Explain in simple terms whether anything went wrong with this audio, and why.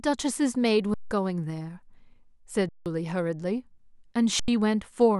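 Three short breaks interrupt the speech, each an underrun with held sample: at 0.94 to 1.11 s and 2.69 to 2.86 s (about 170 ms each), and at 4.40 to 4.48 s (about 85 ms). Playback ran out of data, so the output froze on its last value. The sound stops almost without a click, unlike a plain dropout to silence. Speech was skipped during each gap.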